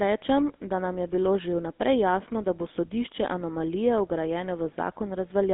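Speech runs through a GSM full-rate codec for the whole clip. The band is squeezed to roughly 250 Hz to 3.6 kHz, so the sound is thin and muffled at the top. A plainly audible buzzy, gravelly roughness sits on the voice. The codec rebuilds the voice from a vocal-tract filter fed by a coarse, regularly spaced pulse excitation. That sparse excitation is what grinds, and the damage fits a 13 kbps GSM full-rate stream.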